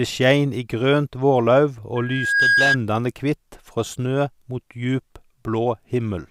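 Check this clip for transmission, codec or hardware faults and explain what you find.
One hardware fault is present: a loudspeaker feedback squeal from 1.95 to 2.77 s, starting just after "skein i grønt vårlauv" and ending before "kvitt frå". A microphone is picking up the loudspeaker it drives, and at 1.6 kHz the loop gain exceeds unity, so that frequency reinforces itself on each pass. It swells over roughly half a second into a steady whistle that ends up a few decibels louder than the speech before it cuts off.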